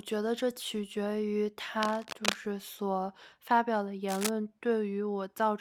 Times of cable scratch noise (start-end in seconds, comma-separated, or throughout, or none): 1.82-2.35, 4.08-4.29